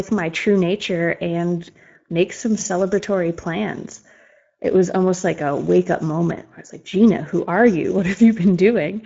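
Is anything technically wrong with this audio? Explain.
Yes, the speech carries Speex codec damage from start to finish. The CELP coder doesn't have enough bits for the excitation, so voices come out noisy and hoarse, which fits a bitrate of around 17 kbps. Nothing survives above about 7.7 kHz.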